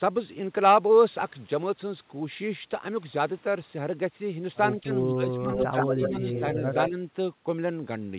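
At 4.82 to 4.92 s and 5.09 to 5.52 s the speech drops sharply, by about 20 dB and then about 25 dB. This is speech suppressed in double talk. The likely cause is an echo canceller mistaking overlapping talk for echo and turning it down.

From 5.52 to 6.41 s a delayed copy of the speech follows it, 121 ms behind and at roughly the same level. This is echo leak. The echo canceller likely failed to remove the loudspeaker sound.

During that stretch, from 5.73 to 6.63 s, the speech dips slightly, by about 5 dB. Suppression likely caused this too.

The echo returns at 6.72 to 6.92 s, again 121 ms late. It is likely the same leak.

At 6.89 to 7.0 s the speech drops by about 10 dB. Double-talk suppression is the likely cause.

Throughout, nothing is heard above 4 kHz.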